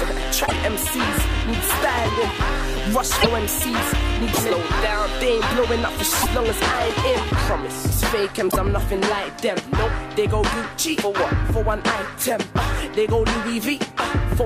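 Five short glitches hit at 0.46, 3.20, 4.33, 6.21 and 8.50 s. Each jumps ahead, then gives 55 to 70 ms of broken-up audio, about two or three 26 ms frames. That's likely a broken MP3 bit reservoir: dropped frames left the following ones reading borrowed data from the wrong bytes.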